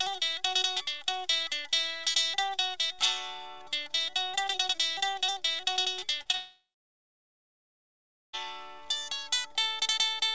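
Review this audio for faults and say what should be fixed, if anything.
Short concealed packet loss occurs twice: 6.22 to 6.27 s, where about 40 ms of audio failed to reach the decoder in time, and 6.31 to 6.35 s, where about 20 ms was missing. Each time the receiver extrapolated the preceding sound across the gap and crossfaded back into real audio, which produces a brief smear or wobble rather than a clean hole. To prevent it, enable FEC and size the jitter buffer for the path's observed loss pattern.

Immediately after the second gap, from 6.35 to 8.35 s, about 2 s of audio is absent. Concealment continues the last sound only briefly, decaying into roughly 1.7 s of silence, and the audio then resumes at 8.35 s with the intervening material gone, not delayed. This is a long network dropout, and its likely cause is a sustained break in packet delivery, with the two short losses just before it as early symptoms. 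Preventing it means fixing link stability through better connectivity, QoS prioritisation of the media stream, or redundant routing. Receiver settings cannot recover audio that never arrived.

The band limit at 8 kHz is expected from the wideband codec on the call path.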